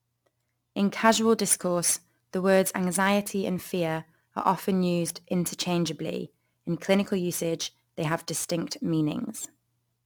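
Throughout the speech, crude rate conversion is audible. Samples seem dropped or repeated without filtering, which fits a 48 kHz to 44.1 kHz change. The periodic error, about 20 dB below the signal, adds a gritty, inharmonic fizz that tracks loud and high-frequency sounds.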